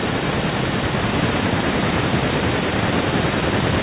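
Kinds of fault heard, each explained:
Nothing stood out on listening to this speech clip, which came through a call path limited to about 4 kHz.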